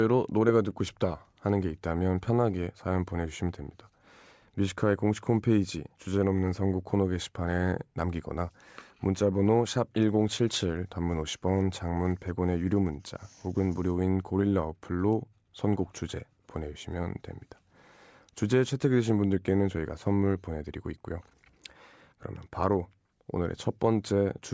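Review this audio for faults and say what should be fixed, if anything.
Nothing needs to be fixed in this audio, as no faults were found.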